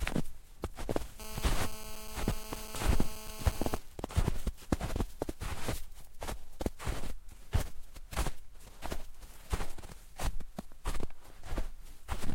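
It's a recording of everyday sounds, and from 1.2 to 3.77 s there's GSM phone buzz: a hard, raspy 217 Hz drone with lots of harmonics, holding steady at about 14 dB under the sound. That's a 2G phone mid-call nearby, its transmit bursts getting rectified in the audio circuitry.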